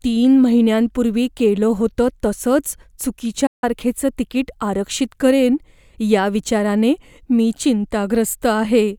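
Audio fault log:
3.46–3.64 s, digital broadcast dropout: the receiver lost good frames and muted, so the speech fades out within 8 ms, leaving a 160 ms gap.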